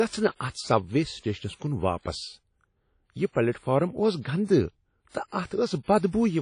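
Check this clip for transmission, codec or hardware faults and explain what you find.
There are two codec problems here, one that runs through the whole clip and one that shows up at two attacks.

Throughout, the speech sounds washy and ringing, with a hiss that swells and fades with the level, and nothing above 10.1 kHz. That's likely WMA compression at a low bitrate, around 32 kbps, where quantisation noise smears across long blocks and weak detail gets zeroed out.

At 0.50 to 0.55 s (44 ms) and again at 5.09 to 5.14 s (55 ms), there's pre-echo: a brief hiss creeps in just before a sharp onset, which sounds softened. The codec spreads noise meant for the loud attack back across the quiet part of the same block.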